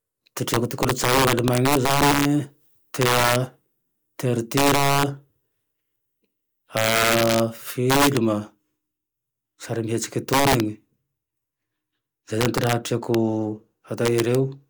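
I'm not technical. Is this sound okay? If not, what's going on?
No. The speech has integer overflow throughout: its loudest peaks wrap around to the opposite extreme, giving sharp, violent cracks on a small share of sounds.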